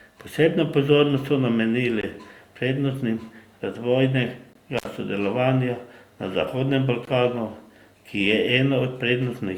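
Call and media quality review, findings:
Gap between chunks: 20 ms hard-edged silent holes at 2.01, 4.53 and 7.05 s, one per 2.5 s block of speech. Playback or transport chunking, where each block starts late or carries padding and leaves silence at the join. Nothing missing, only interrupted.

Intermittent contact: dropout 4.77 to 4.86 s, with the line open for about 64 ms, crackle at both edges and faint hiss through the gap. Probable component is a loose cable or connector briefly breaking the signal path, mechanical rather than a digital fault.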